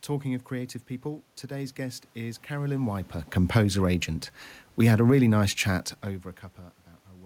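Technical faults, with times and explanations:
4.65 to 5.96 s, automatic gain falling: just after "composer agent" the level sinks by about 3 dB over roughly 1.3 seconds. The automatic gain control judged the input too loud or its background noise too strong and wound its gain down gradually, so the speech and the room noise beneath it drop together. That shared fall separates it from the talker moving around 2.5 s and 6.0 s, where only the voice level shifts.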